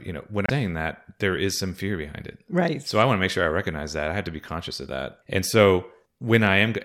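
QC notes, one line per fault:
0.46–0.50 s broken MP3 bit reservoir: the audio jumps ahead after "you know when", likely from a dropped frame; the disturbance lasts about 41 ms, roughly 1.6 frames of 26.1 ms.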